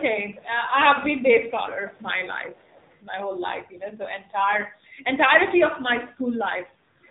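AMR narrowband mobile codec damage runs through the entire speech clip, from start to finish, and is plainly audible. The band stops at 4 kHz, because the codec samples at 8 kHz and discards everything above, so sibilants and air are gone. At the low bitrate the sound points to, around 7.4 kbps, the codec's vocal-tract model and sparse pulses per 5 ms subframe leave the voice thin, buzzy and synthetic, as over a 2G or 3G phone call.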